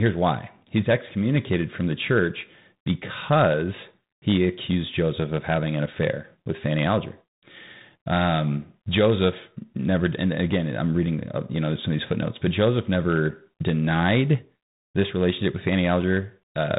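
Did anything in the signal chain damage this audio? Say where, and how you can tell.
Yes, tandem speech coding at the codec stage: throughout, speech is band-limited to 3.8 kHz and rougher than one pass, consistent with G.726 32 kbit/s, G.711, then G.726 again, compounding quantisation noise.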